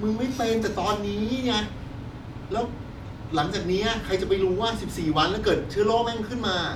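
No technical faults can be heard anywhere in the recording.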